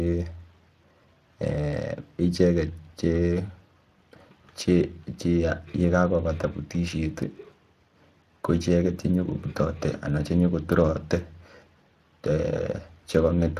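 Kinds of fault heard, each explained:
Speex codec, throughout: this CELP speech coder models the voice with a filter plus a coded excitation, and too few bits for that excitation leave the speech plainly hoarse and noisy. The damage fits roughly 22 kbps, with nothing above 15.4 kHz.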